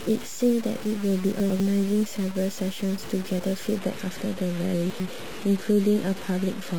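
From start to finish the speech carries a coarse, grainy distortion that tracks its level, with quiet stretches sputtering between steps. The likely cause is low bit depth without dither, around 5 bits and truncated. Error sits roughly 15 dB below the signal, and the waveform shows visible staircase levels.

Between 1.4 and 1.6 s, two 100 ms chunks of audio play out of order: the earlier one arrives one chunk late and is heard after its successor. The moment sounds jumbled, with three hard joins, each a vertical line on a spectrogram and a discontinuity in the waveform.

From 3.79 s to the end, an adaptive stream drops to a lower bitrate without any gap. The treble drops, and codec artefacts rise, which fits a switch from AAC-LC at 96 kbit/s to HE-AAC at 20 kbit/s. A spectrogram shows nothing above 14.9 kHz from that point.

Within that stretch, between 4.9 and 5.1 s, a second pair of 100 ms chunks plays out of order, one chunk late. 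It sounds like the same garbled stutter with three hard joins, and shows the same sharp vertical joins on a spectrogram.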